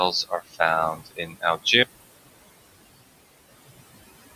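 Noise suppressor artifacts run throughout. The suppressor pulls the room noise, itself about 16 dB below the speech, down by about 19 dB between phrases and lets it swell back underneath them. A spectrogram shows the noise floor pumping frame by frame.

Speech cut by the noise suppressor occurs from 0.24 to 0.6 s and from 0.94 to 1.66 s. Quiet parts of the speech, taken for noise, drop by up to about 17 and 19 dB, roughly a sixth and a third of a second in total. They sound swallowed, and the waveform shows sudden notches in the envelope.

An audio dropout to a faint residue begins at 1.83 s and lasts to the end. The speech stops abruptly, leaving only mains hum roughly 50 dB down. This is likely the signal being lost while the path after it stayed live. On a spectrogram the speech harmonics vanish, and thin steady horizontal hum lines remain.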